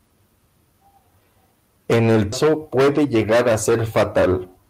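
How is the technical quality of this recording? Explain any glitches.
The recording has two timing glitches close together, both of which break the natural flow of the speech.

At 2.32 s the speech lurches forward with no pause, as though about 0.7 s of talk vanished and its edges were glued together. This is a skip ahead: a jitter buffer overflowed or audio went missing in transit, and playback jumped to later material already waiting.

From 2.90 to 3.21 s the talking runs about 12% fast, sounding briefly rushed while the pitch stays put. This is a jitter buffer speed-up, where the receiver snipped out short pitch-period pieces repeatedly, a few tens of milliseconds in all, to shrink excess delay.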